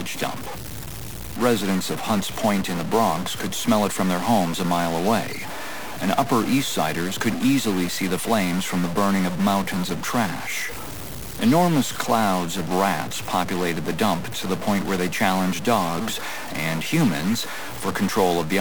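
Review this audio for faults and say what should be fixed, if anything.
A stuck bit runs through the whole recording, heard as a harsh, buzzy distortion that never lets up and a noise floor that stays raised even where the sound should fall quiet. The likely cause is one data bit held at a fixed value, so about half the samples jump by a step of roughly -25 dBFS, flipping as small values change sign. On a waveform, quiet passages show a dense square-edged band instead of silence; a spectrogram shows broadband energy filling every gap. Fix the converter or the data line feeding it, and test each bit with a low-level sweep before recording.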